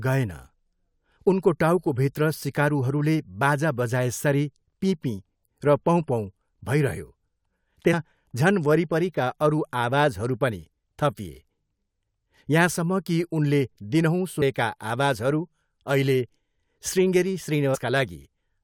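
Damaged data in a compressed stream corrupts three spots in this speech clip, so the decoder loses frame sync and jumps to the next header. Each is heard as a brief glitch, at 7.92 s just before "झन वरिपरिका अरू आवाजहरू", at 14.41 s, and from 17.74 to 17.76 s.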